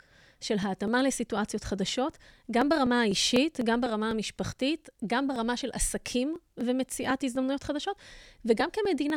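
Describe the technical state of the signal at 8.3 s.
At 8.3 s the signal is inside a run of periodic USB or driver dropouts lasting from 0.13 s to 9.10 s. Every 0.249 s something blocks the audio path and about a millisecond of speech is skipped outright, so the waveform jumps across a small discontinuity that is heard as a regular tick during speech. A spectrogram shows evenly spaced thin vertical broadband lines, and the waveform shows abrupt steps at each splice.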